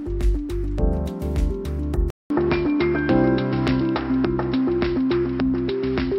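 At 2.10 s a 200 ms gap leads into duller, band-limited audio with nothing above 5.5 kHz and a new noise floor; the input likely switched to a poorer device.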